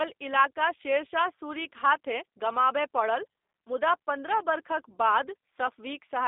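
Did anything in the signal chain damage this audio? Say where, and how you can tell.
Yes. Throughout, the speech sounds slightly rough and synthetic, confined to a 300 Hz to 3.7 kHz telephone band with nothing above 3.7 kHz. This is G.729 codec damage at the codec stage, which fits an 8 kbit/s stream rebuilding speech from a vocal tract filter, pitch predictor and sparse pulses.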